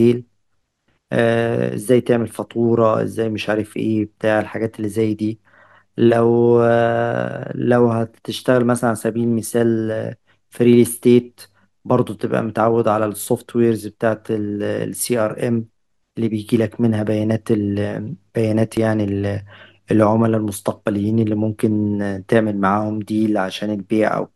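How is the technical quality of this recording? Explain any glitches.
The recording has one glitch. Audio missing between chunks at 18.77 s: a tiny piece of the speech, roughly 10 ms, is gone and the two sides butt straight together, giving a brief skip. The likely cause is a recorder working in 10-second chunks dropping audio at the handover.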